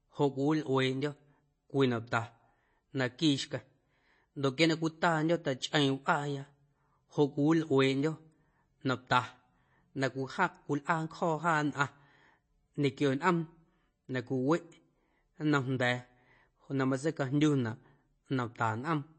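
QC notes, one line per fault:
Throughout, MP3 compression: the speech has nothing above 8.3 kHz, and the damage is plainly audible as a watery, swirling texture with metallic chirps on s sounds and smeared consonant attacks. The likely cause is an MP3 encoder short of bits, which fits a rate near 32 kbps. It cuts the treble at a fixed point and zeroes weak frequency lines, and as those lines flicker on and off between frames, the sound warbles.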